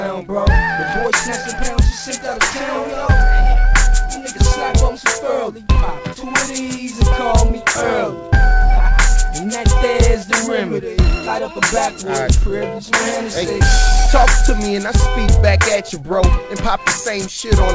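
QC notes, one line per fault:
Throughout: clock drift between sender and receiver. The sender's clock runs around 4 percent fast, so the jitter buffer keeps overfilling and the receiver must discard short slices to stay in step. A spectrogram, band-limited at 8 kHz by the G.722 call path, shows small unevenly spaced breaks.
0.2–17.61 s: repeated timing corrections. Short pieces are cut out again and again, always removed rather than repeated, at uneven intervals, bringing playback to 104 percent speed. Each cut is small and, if noticed, comes across as a hiccup or unsteady tempo. The waveform shows tiny splices where the envelope jumps.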